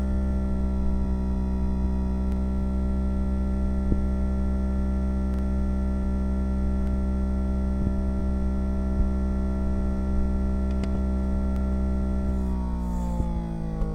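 Repeated buffer at 2.32, 5.34 (twice over), 6.83 and 11.56 s: audio arrived late, so a 46 ms chunk, fitting a 2048-sample buffer, replays as a hard-edged stutter.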